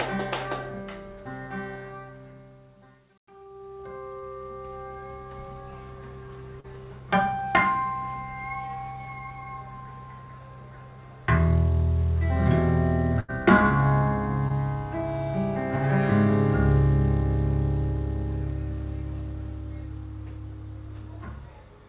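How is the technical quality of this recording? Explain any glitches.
The recording carries the narrowband sound of a telephone-style call link, with nothing above 4 kHz, which fits G.711 mu-law coding. It has four brief dropouts where audio failed to arrive in time.

Short concealed packet loss occurs at 4.20–4.24 s, 6.60–6.66 s and 14.48–14.52 s. Each time, 20 to 40 ms of audio was missing, and the receiver patched the hole by extending the preceding sound, either its pitch or a shaped noise, before easing back into the real signal. Each one comes across as a quick smear or wobble, and a very short sound falling in the gap can disappear.

A burst of packet loss runs from 13.20 to 13.30 s. About 80 ms of audio went missing in a row, and the receiver stretched the last sound over roughly 86 ms while fading it down. This is heard as a brief held buzz or fading hiss. The sound then picks up slightly further along, and the material that fell in the gap is simply absent.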